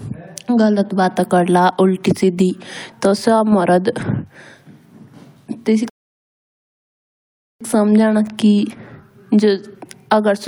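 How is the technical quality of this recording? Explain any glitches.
Speech in this clip stops dead at 5.90 s and the recording falls silent until 7.61 s, then picks up exactly where it left off, with nothing skipped or repeated. That is a rebuffering stall: playback consumed all the audio it had downloaded and had to wait for more to arrive before continuing. The pause adds about 1.7 s to the running time, and because no audio is lost, the speech simply resumes after the gap.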